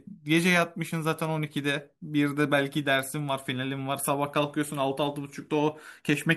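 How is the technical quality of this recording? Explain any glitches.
Nothing stood out on listening to this recording, and there are no glitches to explain.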